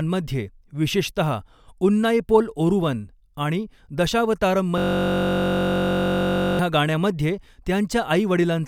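A system hang loop runs from 4.78 s to 6.59 s. The machine or its audio driver stalled while the playback hardware kept reading the same 21.33 ms stretch of its ring buffer, which fits a 1024-sample buffer. That one fragment repeats exactly at 46.9 Hz, so the speech collapses into a steady, flat buzz at that rate. When normal playback resumes, about two seconds of the original speech are missing.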